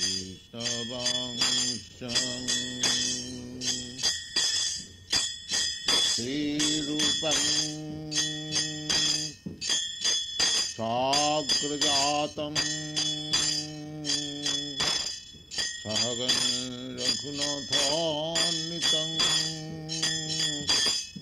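At 2.08 s a call bitrate drop sets in: the bandwidth estimate fell and the encoder coarsened its coding, in a way that fits a fall from about 96 kbps to about 15 kbps, held for about 4.9 s. The audio turns rough, watery or muffled, and a spectrogram shows the upper band cut away and smeared, blocky texture below it. By 7.03 s the bitrate has recovered, and the lost high frequencies return.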